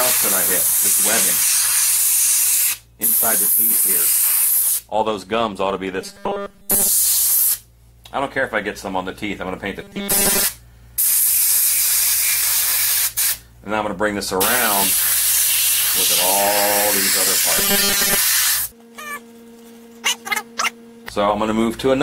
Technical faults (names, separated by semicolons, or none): robotic sound from repeated short buffers